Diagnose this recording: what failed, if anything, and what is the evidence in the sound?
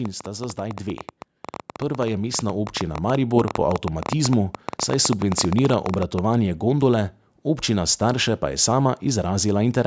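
A train of clicks runs from 0.05 to 6.2 s, about 11.4 per second, unevenly spaced, roughly seventy, around 10 dB above the speech. Likely interference in the analogue wiring.

Automatic gain rising in call processing lifts speech and background together by 7 dB between 1.81 and 3.62 s. The gain control judged the input too quiet.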